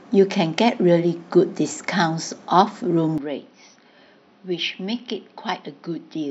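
Input switched to a poorer device at 3.18 s, lasting to the end: the speech abruptly turns duller and boxier, with nothing above 6 kHz, and drops roughly 10 dB in level, with no gap at the switch. A faint new background noise appears, far below the speech at roughly 45 dB down. The likely cause is the system changing its input mid-recording to a lesser microphone or a headset's call profile, bringing a different tone, level and noise.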